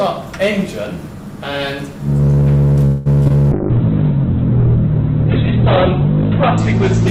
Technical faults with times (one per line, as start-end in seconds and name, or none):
0.00-7.10 hard clipping
2.85-3.07 call audio freeze
3.23-3.32 short concealed packet loss
3.52-7.10 call bitrate drop